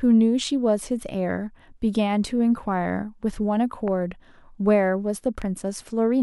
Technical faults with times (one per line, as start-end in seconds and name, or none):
3.88-3.90 loud pop
5.42-5.44 loud pop